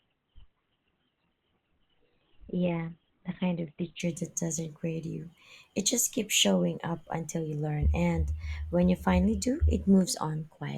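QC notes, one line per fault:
0.00–4.00 s, adaptive stream starting at a low bitrate: the speech opens thin and smeared, with nothing above 4.3 kHz and heavier codec artefacts, then jumps to full quality at 4.0 s, just before "that doesn't grade you". The player began on a cheap stream for a fast start and switched up once it had gauged the connection. The sound fits Opus at about 12 kbit/s rising to about 64 kbit/s. Unlike a dropout, the switch leaves no gap or glitch, and unlike a fixed filter, the improvement is one clean step at 4.0 s.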